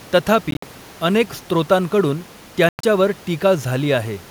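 Bluetooth dropouts at 0.51 to 0.63 s and 2.69 to 2.84 s: the speech cuts to silence in broken gaps, the longest about 58 ms and 102 ms. It resumes further along, likely from packets reaching the headphones too late and being discarded.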